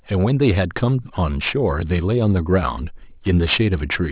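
Sibilants in this speech clip sound gritty and metallic from start to finish, with the spectrum running hard up to 4 kHz. This is aliasing: the sound fits a drop from 24 kHz to 8 kHz without filtering, so energy above 4 kHz folds back, roughly 20 dB below the speech.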